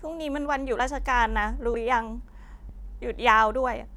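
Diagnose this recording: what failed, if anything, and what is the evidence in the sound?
Skips at 0.79, 1.74 and 2.69 s each drop around 50 ms with the edges butted together. That's likely audio missing between chunks, lost at one-second buffer handovers.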